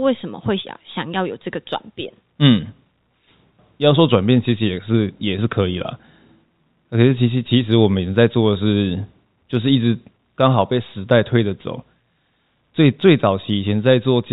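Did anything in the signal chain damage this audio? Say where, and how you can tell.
No, nothing in the chain stood out as damaging on listening.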